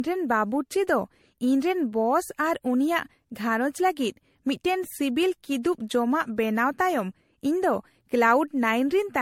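The speech sounds swirly, smeared and hollow from start to finish, with blurred consonant attacks and nothing above 16.5 kHz. This is generation loss, likely from around seven passes of MP3 encoding near 67 kbit/s, each adding fresh quantisation noise and spectral holes.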